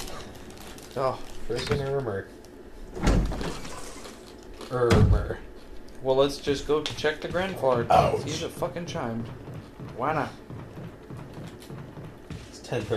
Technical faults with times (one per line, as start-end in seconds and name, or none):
none